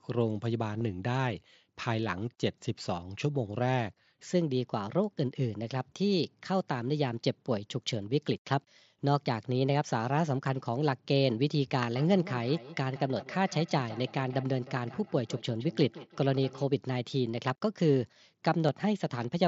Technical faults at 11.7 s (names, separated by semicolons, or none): section at the wrong speed